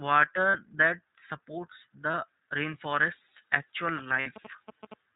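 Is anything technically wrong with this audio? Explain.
Yes. Throughout, the speech is carried by the iLBC codec: nothing passes above 4 kHz, and each frame's excitation is coded independently, so the speech sounds slightly rough and synthetic rather than merely muffled. The texture fits the 15.2 kbps, 20 ms frame mode.

There are lost iLBC frames at 0.50–0.59 s, at 2.12–2.15 s just before "rainforest's actual", and at 4.20–4.28 s just after it. These gaps last 40, 20 and 60 ms, which fits two, one and three lost frames. Each is concealed by repeating the last pitch cycle with added noise, giving a brief buzzy, held vowel. Unlike a dropout, there is no silence, and the speech recovers almost at once.

From 3.98 to 4.94 s, after "rainforest's actual", GSM signalling bursts can be heard about 15 dB below the speech. Rectified radio bursts from a nearby phone produce a galloping dit-dit-dit of short 217 Hz buzzes. 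This rhythmic pattern sets them apart from a steady mains hum.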